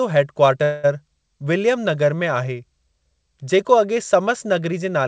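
From 0.64 to 0.86 s the speech stops and a fading buzzy hiss fills about 0.2 s before the speech resumes where it left off, with nothing lost. This is a call audio freeze, likely from delayed packets emptying the jitter buffer, with the band topping out near 8 kHz.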